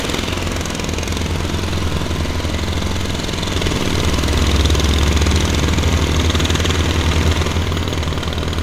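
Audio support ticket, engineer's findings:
Listened through the whole clip and nothing stood out as a problem, so there's no finding to log for this one.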